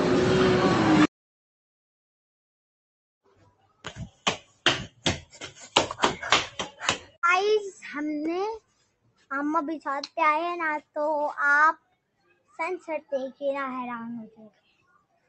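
A noise suppressor built for speech, left running on this sound throughout, mistakes steady material for noise and swings the level by around 15 dB, so the audio pumps and thins. The sound is cut by the noise suppressor hardest at 3.26 to 4.65 s, 4.87 to 5.58 s, 6.5 to 7.17 s, 8.59 to 9.31 s, 10.81 to 10.96 s, 11.77 to 12.59 s, and from 14.3 s to the end. There, held sound and tails sink by as much as about 20 dB.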